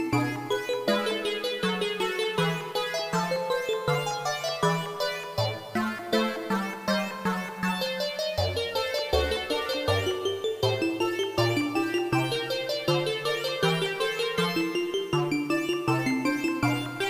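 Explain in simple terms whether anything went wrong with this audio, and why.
Yes. From the first second to the last, the sound carries a grainy, gritty roughness that rises and falls with the audio itself. That is the signature of low bit depth without dither. The audio was likely stored with very few levels, which fits about 7 bits, and each value was simply rounded to the nearest step. Because no masking noise was added first, the rounding error tracks the sound and is heard as distortion.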